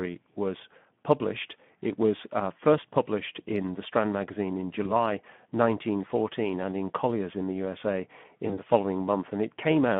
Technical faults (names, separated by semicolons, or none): Speex codec; VoIP packet loss concealed by the speech codec